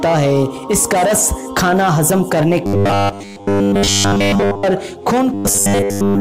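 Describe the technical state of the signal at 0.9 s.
At 0.9 s the signal is intact, with no dropout, distortion, noise burst or other technical fault audible at that point.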